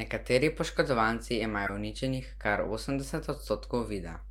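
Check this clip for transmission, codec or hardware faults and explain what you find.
Two faults are present: a continuous mains hum and two short glitches from corrupt frames being decoded.

Mains hum runs through the whole clip as a steady low 50 Hz drone, roughly 15 dB below the speech. It comes from a ground loop or nearby transformer leaking power-line current into the signal.

A corrupt frame decoded produces a glitch from 1.66 to 1.70 s, just before "uničenih kar", and a fainter one at 3.34 to 3.36 s. In each case the decoder played damaged compressed data, spreading energy across the wrong frequencies for the length of the frame. The first event is louder and spans a few frames, and the second spans about one.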